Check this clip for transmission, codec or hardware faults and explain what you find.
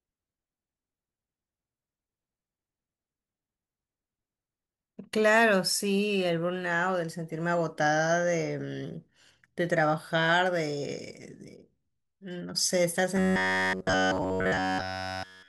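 One fault is present: robotic sound from repeated short buffers, from 13.17 s to 15.49 s. Throughout that stretch the speech becomes a rigid metallic buzz at 93.8 Hz. The likely cause is starved input, with a roughly 10.7 ms block looped in place of the missing audio.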